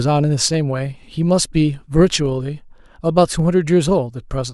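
Dropped samples at 0.54 s and 2.26 s in this speech clip: each is a single sharp click, likely from a fraction of a millisecond of samples missing, so the waveform jumps abruptly to a later value and shows a thin vertical line across the spectrum.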